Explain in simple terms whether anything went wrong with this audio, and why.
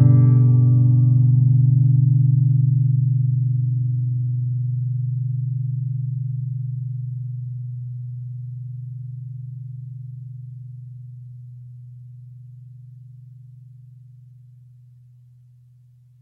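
Nothing went wrong with this audio; every part of it sounds the way it should.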